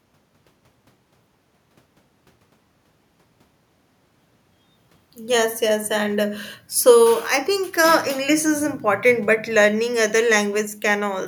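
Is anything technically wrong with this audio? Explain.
No, nothing technically wrong can be heard here.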